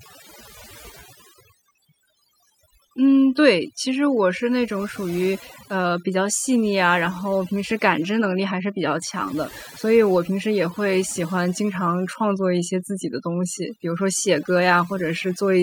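Overdone noise removal runs throughout: an over-aggressive reducer gates bands near its noise estimate, leaving near-silent gaps with twinkling specks.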